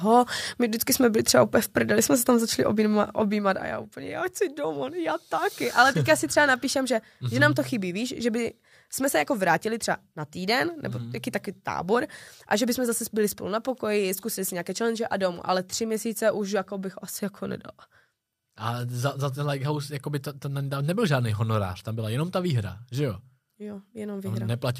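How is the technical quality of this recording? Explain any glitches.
The recording has one glitch, a burst of zipper noise during a level drop.

Zipper noise, 3.09 to 3.91 s: the level falls by roughly 10 dB, but the gain is applied in discrete jumps, around 20 per second, with no smoothing between them. Each jump puts a tiny discontinuity in the waveform, so over those 0.82 s the speech carries a fine ticking, zipping texture.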